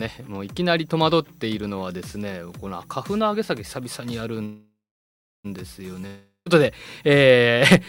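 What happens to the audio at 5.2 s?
Packets were likely delayed and the jitter buffer ran dry, causing a call audio freeze from 4.45 to 5.46 s. The receiver extends the last sound into a fading fill, about 0.7 s of it silent, then resumes where it stopped, losing nothing but running 1 s late.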